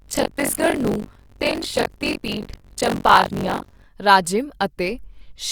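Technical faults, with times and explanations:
0.0 to 3.86 s, buffer tearing: the speech carries a rough, robotic rattle at about 46.9 Hz, present only while there is signal. The writing side and the playback side of the ring buffer have drifted so their positions cross inside each period, which fits a 1024-sample buffer. Roughly a third of every period replays audio around 40 ms stale, spliced in with hard joins at both edges. Those repeating discontinuities make the buzz.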